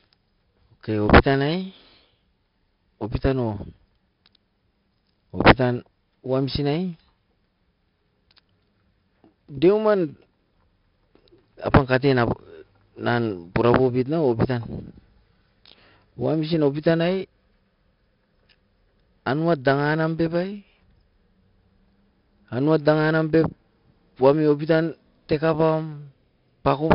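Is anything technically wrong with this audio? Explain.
Yes. Throughout the speech, 4-bit ADPCM compression codes each sample as a coarse step from a prediction, which fits about 44 kbps. The error rides under the speech as gritty hiss, heavy here, with harsh attacks, and nothing above 5.3 kHz suggests a low sample rate dulling it.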